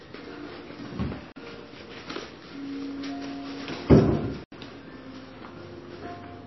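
From start to finish the audio has no content above 5.8 kHz and a watery, swirling texture, with metallic chirps on sharp transients and smeared attacks. This is likely MP3 compression at a low bitrate, roughly 25 kbps. With too few bits, the encoder removed the treble at a fixed point and let weak frequency lines drop in and out from frame to frame. A plain low-pass filter would dull the sound in the same way but would not make this shifting, bubbling grain.

At 1.32 s, a block of digital silence lasting 40 ms cuts the audio to silence. A second block starts at 4.44 s and lasts 80 ms. In each case a run of samples was replaced by zeros, most plausibly because the output buffer was not filled in time. Both edges are abrupt with no fade. Dropout concealment would fade or smear across the gap instead of leaving sharp edges and dead silence.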